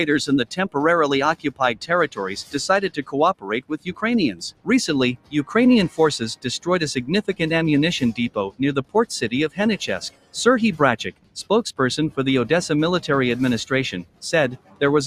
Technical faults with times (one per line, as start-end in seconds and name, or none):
0.00-15.06 noise suppressor applied to music or sounds
1.35-5.34 sound cut by the noise suppressor
5.89-6.67 sound cut by the noise suppressor
8.29-8.95 sound cut by the noise suppressor
9.49-10.35 sound cut by the noise suppressor
11.09-11.72 sound cut by the noise suppressor
14.03-14.81 sound cut by the noise suppressor